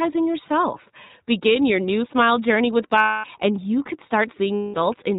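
Speech heard through the iLBC codec, with plainly audible coding damage throughout: nothing above 4 kHz survives, and the voice has a rough, slightly synthetic edge, which fits iLBC's 15.2 kbps mode with 20 ms frames. Unlike a wideband codec's smearing or pre-echo, the damage here is a hard narrowband ceiling combined with a grainy excitation, because each frame's excitation is coded on its own.

Lost iLBC frames cause two gaps, from 2.98 to 3.26 s (260 ms) and from 4.54 to 4.76 s (200 ms). Neither gap falls silent as a plain dropout would. Instead each fills with a held, faintly buzzy, breathy vowel that fades as the decoder repeats the last pitch cycle mixed with noise. The voice returns cleanly right after each gap, without the lingering smear that codecs relying on the previous frame show.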